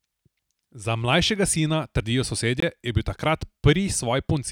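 A speech recording with one block of digital silence, from 2.60 to 2.62 s, just before "je bil". The sound drops to silence for about 21 ms and returns abruptly. That length fits a 1024-sample buffer left unfilled in time.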